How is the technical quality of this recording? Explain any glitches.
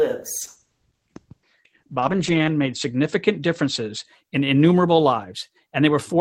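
One glitch affects the quality. A call bitrate drop runs from 0.42 to 4.13 s: the encoder gets far fewer bits and codes coarsely, cutting highs from 20 kHz to 8 kHz. The speech turns rough and muffled, which fits a fall from 40 to 10 kbps, lowest for about 2.1 s.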